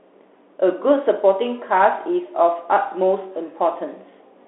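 From start to finish the speech sounds boxed-in and thin, with no low warmth below about 300 Hz and nothing bright above 3.5 kHz. A grainy hiss sits under it and s sounds come out scratchy. This is the Bluetooth CVSD headset codec, which fits a 64 kbps link. It codes each sample as a single up-or-down step of adapting size, so fast high detail outruns the steps and turns rough.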